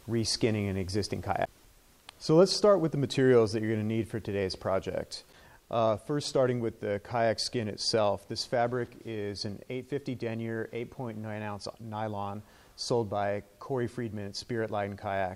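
Nothing in this audio stands out as a technical fault, so there's no problem to point to at any moment.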